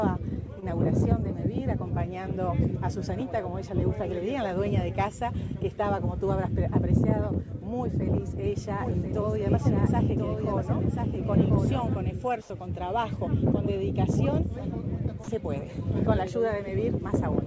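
Short concealed packet loss at 0.60 to 0.64 s: about 20 ms of audio arrived too late, and the receiver extended the preceding sound, leaving a brief smear before real audio resumes.

A doubled audio track runs from 8.81 to 11.91 s: a second, full-band copy trails about a second behind at about 5 dB lower, likely from a slower capture path, and starts and stops abruptly.

Comfort noise in place of the background appears at 12.42 to 12.50 s: for 80 ms the real background gives way to steady, featureless noise about 5 dB quieter. The likely cause is discontinuous transmission during the pause.

Sound dropped by the voice detector at 15.24 to 15.28 s: 40 ms of sound is replaced by flat synthetic noise, likely because the sender misjudged it as background.

Throughout, nothing is heard above 8 kHz, consistent with a wideband call codec such as G.722.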